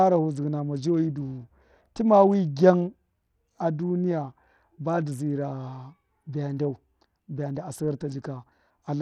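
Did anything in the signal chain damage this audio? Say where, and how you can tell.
Yes, Bluetooth SBC compression damages the speech throughout, at the codec stage: the treble flickers and drops out, with gritty noise and aliasing on the voice. This likely comes from a starved SBC bit pool, consistent with roughly 80 kbps, that leaves the upper sub-bands unfunded.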